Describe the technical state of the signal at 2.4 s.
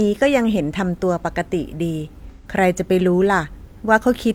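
At 2.4 s the signal is inside a burst of AAC frame loss with concealment, running from 2.31 to 2.47 s. About 128 ms of coded audio is missing, which fits three lost AAC frames. The decoder bridges the gap by reusing the last good spectrum, with its signs scrambled or its energy interpolated. The gap is short, so the sound doesn't fade to silence. It turns into a brief smeared, noisy or phasey patch in the speech.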